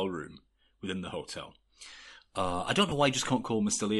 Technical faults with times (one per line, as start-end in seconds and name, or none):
0.00-3.99 Bluetooth LC3 compression
2.89-2.92 lost LE Audio frames